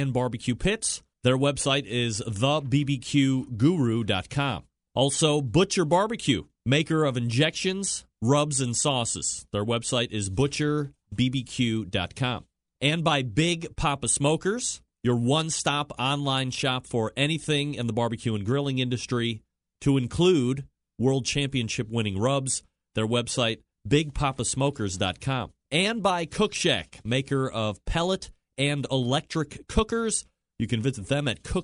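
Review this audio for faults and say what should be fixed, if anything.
Nothing needs to be fixed, as there are no faults to report in this audio.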